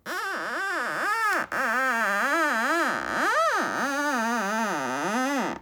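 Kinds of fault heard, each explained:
No technical fault can be heard anywhere in this recording of sounds. Nothing in it stands out as a fault worth explaining.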